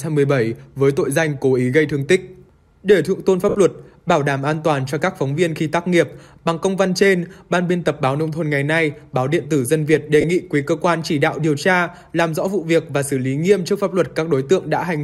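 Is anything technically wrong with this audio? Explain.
Yes, there are two short dropouts from lost LE Audio frames, at 3.49 to 3.55 s (about 60 ms) and at 10.21 to 10.25 s (about 30 ms). Those lengths fit runs of 10 ms LC3 frames going missing over the Bluetooth link. The decoder covers each gap by repeating the last good spectrum with scrambled signs, so instead of silence you get a brief noisy smear where tonal content turns hissy. In the longer gap, that smear starts to fade as the concealment runs on.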